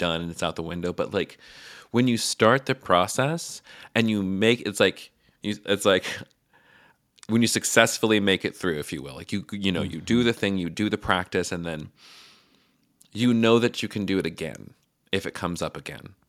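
No technical faults are audible anywhere in the speech recording.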